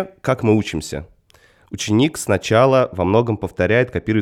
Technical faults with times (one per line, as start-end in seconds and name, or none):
2.80-4.21 de-emphasis applied wrongly